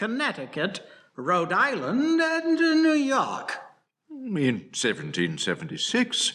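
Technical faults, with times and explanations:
No technical faults are audible anywhere in this speech recording.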